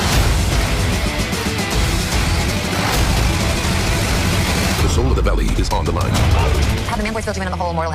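From 2.41 s to the end, the audio suddenly runs faster, about 1.74 times its earlier pace. The pitch does not rise. This is a time-stretched section, likely squeezed by software that dropped short pieces to shorten it. It sounds rushed.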